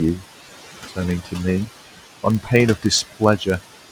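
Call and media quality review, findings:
Noise suppressor artifacts, throughout: room noise, about 13 dB under the speech, dips between phrases and swells beneath them. Suppressor attenuating noise-classified bands by about 15 dB per frame.

Filter restarted on every block, throughout: low 23.4 Hz buzz that tracks speech level. Filter state reset each block, producing a startup transient per block. The rate fits a 2048-sample block.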